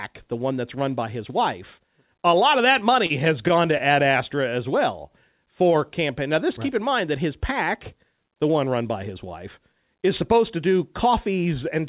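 Short stalls from late packets interrupt this speech clip four times: at 3.06 to 3.12 s, 3.48 to 3.51 s, 3.77 to 3.82 s and 5.07 to 5.11 s. Each time a packet arrived after it was due, the jitter buffer emptied, and the receiver held the last sound for 36, 17, 21 and 28 ms respectively before resuming where it left off. Nothing is lost, but each spot has a brief drawn-out hold with a slight buzz or dip, and the playback delay grows by the same amount. The call path carries nothing above 4 kHz, which points to a narrowband telephone codec.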